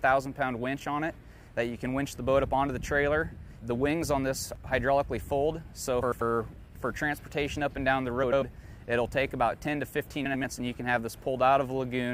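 Frames out of order at 6.02–6.22 s, 8.23–8.43 s and 10.25–10.44 s: two adjacent blocks of about 93 ms play swapped, giving a garbled flutter.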